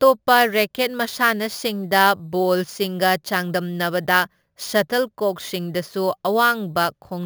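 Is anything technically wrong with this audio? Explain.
Yes. Imaging from sample-and-hold upsampling runs throughout the speech. The images sit between 8 and 16 kHz, which fits audio raised from a 16 kHz rate to 44.1 kHz by holding each sample with no smoothing filter. That stepped waveform folds mirror copies of the speech spectrum above the old band, here at about 18 dB below the speech. It is heard as a bright, metallic fizz that rises and falls with the speech, its lowest copy moving opposite to the pitch.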